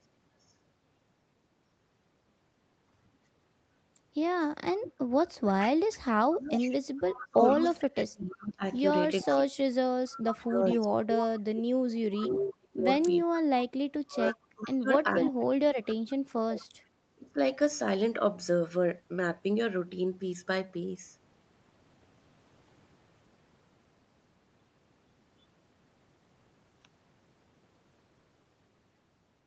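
From 4.81 to 7.84 s there's an echo leak: a delayed copy of the speech, 450 ms behind and about 10 dB down, likely a far-end echo canceller letting loudspeaker pickup through. It comes back at 9.21–10.76 s at the same level and at 14.3–15.95 s, louder at about 5 dB down. Between 6.18 and 17.38 s, speech gets suppressed in double talk, likely the canceller ducking the talker while the other side speaks. It dips or cuts out in pieces, sometimes very deeply, for about seven seconds in total.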